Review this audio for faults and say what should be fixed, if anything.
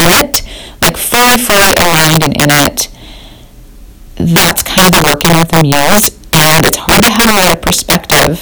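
Violent, hard cracks break out on the louder syllables all through the speech, far harsher than ordinary clipping distortion. This is integer overflow: the signal is being driven about 12 dB past full scale, and instead of being held at the limit, each peak wraps around to the opposite extreme of the integer range. Roughly 7 percent of samples exceed the limit, so every loud moment flips sign and produces a sharp crack. To prevent it, apply saturating arithmetic or a limiter before integer conversion and reduce the gain so peaks stay below full scale.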